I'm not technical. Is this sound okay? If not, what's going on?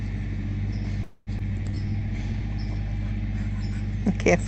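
No. There are three short glitches, all close together.

From 1.03 to 1.30 s there is a call audio freeze. The last sound hangs on as a fading buzz, goes briefly silent, then resumes where it stopped. A delay in the connection is the likely cause.

At about 1.4 s there is a skip ahead. Roughly a tenth of a second is lost, and the sound jumps forward almost without a gap.

From 1.50 to 2.40 s there is a jitter buffer slow-down. The sound plays at 87% speed with the same pitch, so it drags slightly. This adds about 0.12 s.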